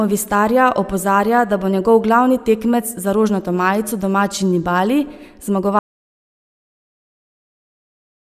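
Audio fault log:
5.79 s to the end at 8.24 s, audio dropout to silence: the speech cuts off mid-flow and never comes back, leaving about two and a half seconds of silence with no room tone or hiss underneath. That dead-flat floor points to the input being lost, likely a disconnected mic or interface, a dropped link or a mute switched on, while the recorder just kept writing silence. Whatever was said after the cut is gone.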